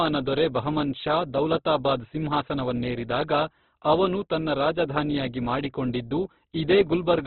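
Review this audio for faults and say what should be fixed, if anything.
Throughout the speech, nothing reaches above 4.5 kHz, and the remaining band sounds grainy, rough and noisy. That points to Opus compression, likely at a very low rate around 12 kbps, where its music mode narrows the bandwidth and fills starved bands with folded or noise content. Encode at a higher Opus bitrate, or keep a lossless original, so the encoder retains full bandwidth and real spectral detail.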